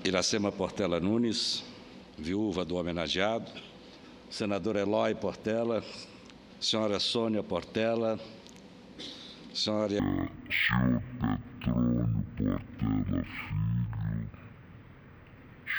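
From 10.00 s to the end at 15.79 s, the audio shows stereo read as mono: interleaved left and right samples are taken as one channel, so sound plays at half speed, an octave low. Unlike a plain sample-rate mismatch, a fainter mirrored copy appears in the upper spectrum.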